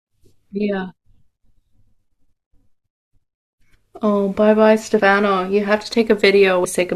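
Compressed frames are skipped at 2.53 s, 4.99–5.01 s and 6.64 s. Whole frames are lost or rejected by the decoder, so the speech jumps ahead by about 300 ms, 100 ms and 150 ms respectively.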